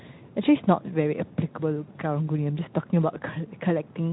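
Nothing stood out as a technical fault anywhere in this speech clip on listening.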